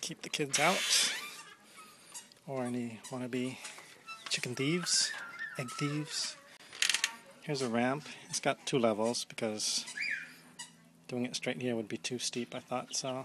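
At 6.57 to 6.60 s there is a gap at a join of encoded pieces. The audio was encoded as separate segments and spliced together without removing the encoder's start-up delay and final-frame padding, so that dead space remains at the seam. The result is a 28 ms gap cut into continuous sound, its edges smeared by the codec, after which the sound resumes exactly where it broke off.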